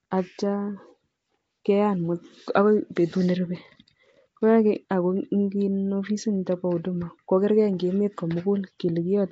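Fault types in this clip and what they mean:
Nellymoser compression: the speech has a rough, hissy halo and a smeared, underwater cast, with nothing above 7.7 kHz, which fits roughly 32 kbps from the likely cause, Flash's Nellymoser Asao codec. Unlike a plain low-pass, weak bands are refilled with noise rather than simply missing.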